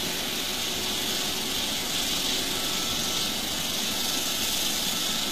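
From start to finish the treble sounds gritty and metallic, with plainly audible coding damage and nothing above 14.9 kHz. The likely cause is HE-AAC compression: the upper band is rebuilt from copied lower bands rather than coded, which fits a low bitrate around 24 kbps.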